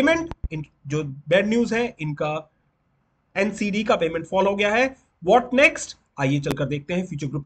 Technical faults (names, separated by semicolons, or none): loud pop